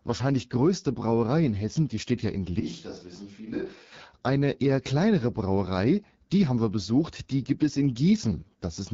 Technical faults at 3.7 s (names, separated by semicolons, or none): AMR wideband (HD Voice) codec; switch to a distant microphone